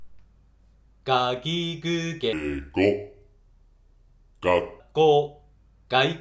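From 2.33 s to 4.80 s the audio drops into a wrong sample rate fault: it plays at about 0.73 times normal speed and sinks roughly 5.6 semitones, heavy and dragging. Speed and pitch falling together like that fits 22 kHz material clocked out at 16 kHz with no conversion.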